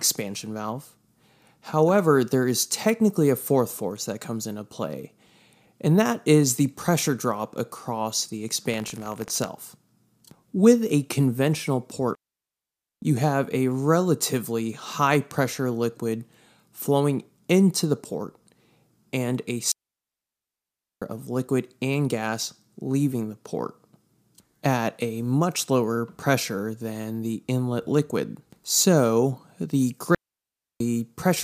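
In this speech clip, right after "pressure drop across the", a robotic 50 Hz buzz rattles through the sound from 8.68 to 9.49 s. This is buffer tearing: writer and reader of the playback ring buffer have slipped, so a small slice of each 20 ms period carries audio from roughly 70 ms earlier, butting against hard joins. Three clean holes of near silence follow, with no noise bursts around them: 12.15 to 13.02 s (0.87 s) after "a conventional" and before "you have a relatively", 19.72 to 21.02 s (1.3 s) after "and a" and before "of liquid and gas", and 30.15 to 30.80 s (0.66 s). These are digital wireless dropouts, where the link lost too much data and the receiver muted with a very quick fade.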